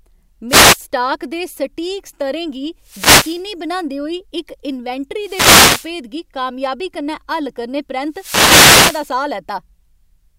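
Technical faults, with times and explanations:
0.48–0.77 s, 2.80–3.47 s, 5.19–5.96 s and 8.09–9.15 s: wireless microphone noise hit. Short bursts of static swish over the speech, the last and longest lasting about a second. The analogue FM radio link fades as reflected paths cancel, so receiver noise rises and masks the signal.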